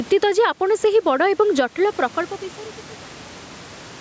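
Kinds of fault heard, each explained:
Gain pumping: throughout, the gain swings around 10 dB, pulling loud and soft parts closer in level, likely a fast limiter reining in excessive microphone gain.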